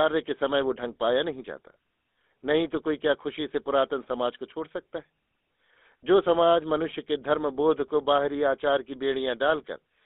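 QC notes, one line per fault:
Throughout: GSM full-rate codec. The speech is confined to roughly 250 Hz to 3.6 kHz and carries a plainly audible buzzy, gravelly roughness. The codec rebuilds the voice from a vocal-tract model excited by sparse, regularly spaced pulses, which fits a 13 kbps GSM full-rate link.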